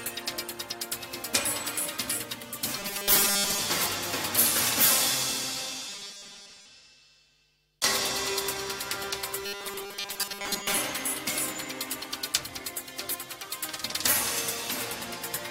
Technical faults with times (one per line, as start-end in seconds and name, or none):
2.78-3.62 robotic sound from repeated short buffers
5.89-6.66 robotic sound from repeated short buffers
9.45-10.77 robotic sound from repeated short buffers